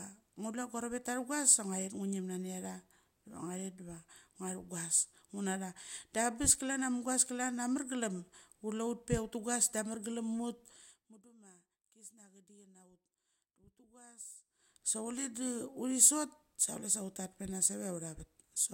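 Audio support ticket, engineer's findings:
No technical defects found in the speech signal on review; the level, timing and signal path show nothing requiring action.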